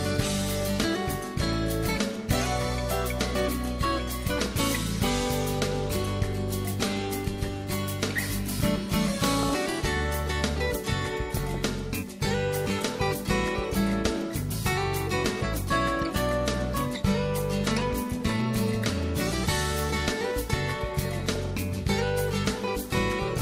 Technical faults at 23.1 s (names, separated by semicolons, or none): none